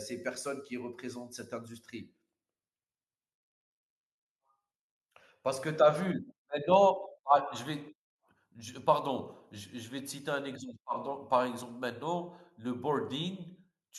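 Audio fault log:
No audible faults found in the speech.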